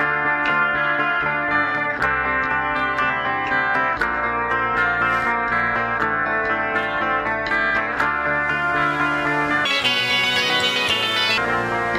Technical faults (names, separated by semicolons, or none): section at the wrong speed